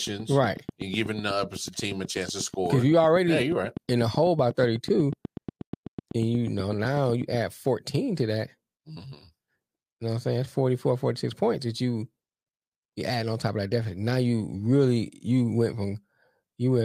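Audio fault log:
0.07–7.36 s, train of clicks: regular ticking at 8.1 clicks per second, around seventy, heard over the speech and in its pauses. Each click has the same sharp shape and peaks well above the speech. Interference from nearby equipment is the likely cause.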